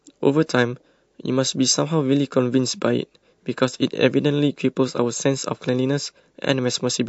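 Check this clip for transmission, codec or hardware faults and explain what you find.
Two codec faults are audible in this speech clip.

Throughout, the sound is watery and swirly with metallic s sounds. This is likely MP3 compression, fitting a low bitrate near 48 kbps.

From 0.46 to 0.49 s, pre-echo puts a 29 ms hiss, about 14 dB up, before an attack. This fits a long 48 ms transform window without short blocks.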